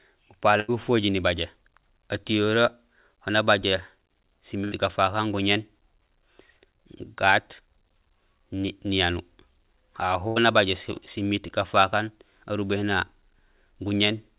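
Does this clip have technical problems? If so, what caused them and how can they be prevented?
Yes. A burst of packet loss occurs three times, at 0.60–0.71 s, 4.64–4.75 s and 10.28–10.39 s. Several packets in a row failed to reach the receiver in time, so it stretched the last sound into a fading buzz or hiss for about 80 ms. Playback then resumed with about 80 ms of audio gone. Forward error correction, a deeper jitter buffer or a less congested network path would prevent it.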